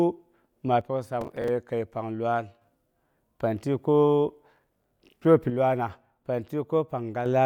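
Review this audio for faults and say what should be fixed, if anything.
From 0.81 to 2.62 s and again from 5.50 to 7.26 s, the speech abruptly drops about 6 dB, likely one channel dropping out before the mono sum.

Processor overload crackle tears through 1.21 to 1.48 s and 4.56 to 5.25 s as gritty crackle, with missed buffers of around 10 ms replaying stale audio.

To prevent these, secure the stereo connections and enlarge the audio buffer or reduce processing load during capture.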